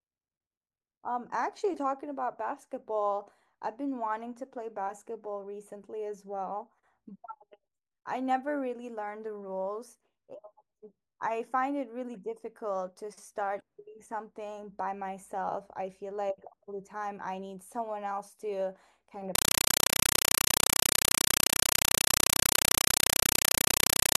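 Compressed stream played as audio takes over this speech recording from 19.35 s to the end: undecoded AC-3 data, fitting a 256 kbps stream, heard as loud static bursts of 5.33 ms repeating 31.25 times a second.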